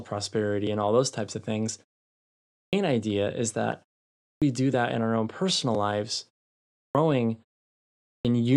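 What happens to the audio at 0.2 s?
Nothing goes wrong at 0.2 s: the speech is intact there, with no dropout, distortion or glitch.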